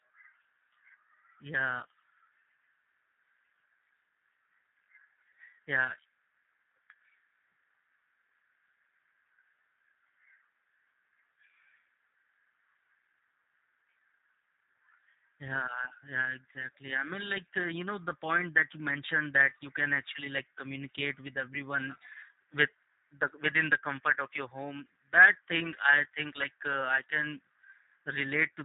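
G.729 codec damage runs from start to finish of this speech. The sound has been squeezed through a low-rate VoIP coder that models each short frame as a vocal tract filter plus pitch prediction and a handful of pulses, rather than keeping the waveform itself. The roughness is plainly audible and fits an 8 kbit/s G.729A stream: a slightly buzzy, synthetic texture on every phrase, with nothing surviving above about 3.8 kHz, so sibilants sound dull and muffled.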